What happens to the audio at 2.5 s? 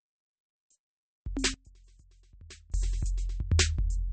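At 2.5 s you're inside a stretch from 1.54 to 2.74 s where the music drops by about 24 dB and goes faint. That's likely one channel inverted: with one side's polarity flipped, everything common to both channels cancels in the mono sum, leaving only the faint difference between them.

On top of that, the whole clip carries MP3 compression damage, likely from a low bitrate, something around 32 kbps by the sound of it. Nothing survives above 8.4 kHz, so the top end is dull, and weak detail flickers in and out between frames, giving a watery, swirly texture.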